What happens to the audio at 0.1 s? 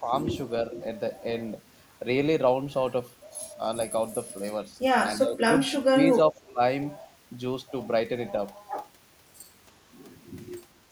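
At 0.1 s the opening speech sits in a brief dip from 0.0 to 0.11 s, heard as speech suppressed in double talk. The level drops by about 5 dB, likely because an echo canceller ducked the near talker during overlap. The waveform envelope shrinks, and the spectrogram fades.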